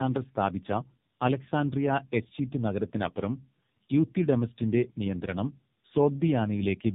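From start to finish the speech carries tandem speech coding. It sounds like two low-rate AMR-NB-style coders in a row, with a G.711 telephone leg between them. The second coder re-encodes the first one's already damaged output, so the sound is rougher, more muffled and more warbly than one pass would leave it. On a spectrogram the energy stops at 3.7 kHz, and the harmonics look smeared and blotchy from frame to frame.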